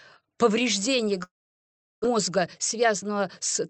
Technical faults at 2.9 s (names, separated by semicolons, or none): jitter buffer speed-up